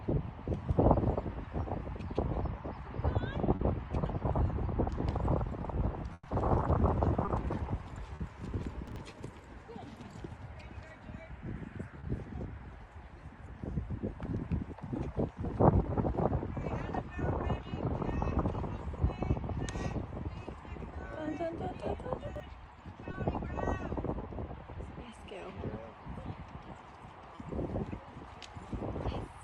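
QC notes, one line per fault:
3.55, 7.25, 8.15, 11.99, 23.11, 27.35 s: short concealed packet loss. 20 to 40 ms gaps are filled by extending the preceding sound, heard as brief smears or wobbles.
6.13 to 6.27 s: burst of packet loss. About 120 ms is synthesised from the last sound and fades, with a 20 ms dropout, then resumes further along.
8.88 to 8.96 s and 22.27 to 22.40 s: chunks out of order. A 43 ms chunk plays one, then two, positions late, giving jumbled moments.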